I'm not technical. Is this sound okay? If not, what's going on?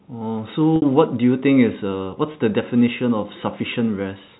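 No. Packet loss with pitch repetition occurs at 0.76 to 0.82 s and again at 2.32 to 2.34 s. Small chunks of the speech went missing in transit, about 60 ms the first time and 20 ms the second. To cover each gap, the receiving end replayed the last tiny cycle of the voice over and over, so you hear a brief held, slightly buzzy sound, a little longer at the first spot.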